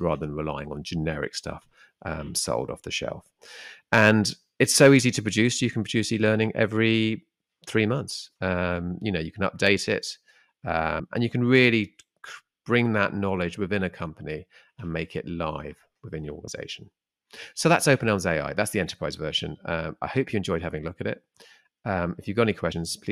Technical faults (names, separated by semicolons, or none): compressed frames skipped